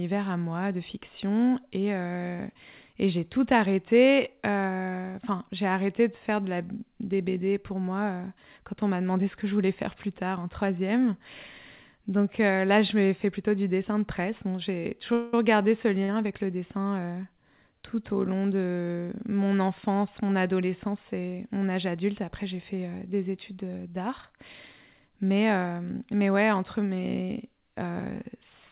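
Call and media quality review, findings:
Call audio freeze, 15.13–15.34 s: sound hangs as a fading buzz or hiss for about 0.2 s, then resumes where it stopped, nothing lost. Jitter buffer ran dry, likely from packets held up in transit; receiver extended the last audio.

Short stall from a late packet, 16.04–16.09 s, just before "avec le": a sound is held slightly too long with a faint buzz or dip, 41 ms. One packet missed its playout slot; the jitter buffer stretched the preceding audio until it arrived.

Jitter buffer speed-up, 24.99–25.24 s: delivery briefly hurried, same pitch, running at 111% speed. Buffer overfilled after bunched packets; the receiver trimmed around 40 ms in small pitch-period cuts to bring the delay back down. G.711 mu-law band limit audible throughout, nothing above 4 kHz.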